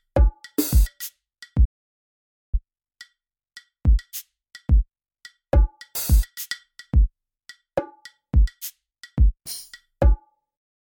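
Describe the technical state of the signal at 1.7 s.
At 1.7 s the signal is inside a playback stall running from 1.64 to 2.55 s: the player most likely ran out of buffered data or had its thread blocked, so output dropped to silence for about 0.88 s, cutting the sound off mid-flow before it resumed.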